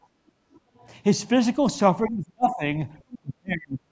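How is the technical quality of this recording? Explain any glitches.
The recording has several echo-canceller glitches in its call audio. The call processing passes nothing above 8 kHz, which is expected for this path.

From 0.10 to 0.44 s, the background is gated by the echo canceller. It clamped the microphone while the loudspeaker played. The room sound sinks, by about 12 dB at its deepest, for roughly a third of a second, then comes back.

The other side's voice is leaking through at 0.55 to 0.59 s, 0.78 to 0.87 s and 3.11 to 3.19 s. The canceller likely left residual loudspeaker sound in the microphone. The first two scraps are very faint. The last is louder, though still well below the talker.

Speech is suppressed in double talk from 2.07 to 2.62 s and from 3.21 to 3.84 s. Both sides were likely talking at once, so the canceller turned everything down. The talker's speech drops very deeply for about half a second and then about 0.7 s.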